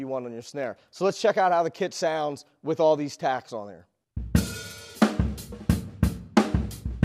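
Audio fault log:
0.64 s and 1.98 s, dropped samples: the stream likely skipped a handful of samples at each point, roughly a tenth of a millisecond's worth, so the waveform leaps straight from one value to a later one with nothing in between. That gap is far too brief to remove any audible sound, but the sudden step in the signal is heard as a single sharp click each time and appears as a thin vertical line across the spectrum.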